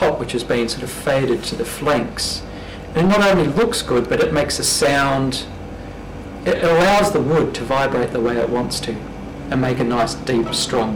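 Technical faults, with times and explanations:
Throughout, hard clipping: the signal is driven about 19 dB past what the stage can pass, so roughly a tenth of the samples have their tops sheared flat. Every loud moment turns to harsh fuzz, not the softer rounding of gradual saturation.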